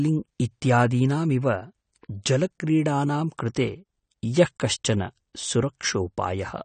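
Throughout the speech, the signal has most likely passed through AAC compression at a low bitrate, where the AAC-LC encoder discards detail its hearing model deems expendable. It lets nothing through above 9 kHz, so the speech sounds dull and lacks air, and the damage is plainly audible. Starved of bits, the encoder leaves gaps across the spectrum or fills bands with substitute noise, giving sibilants a fizzy edge and sustained sounds a warble. That degree of loss fits a bitrate around 32 kbps.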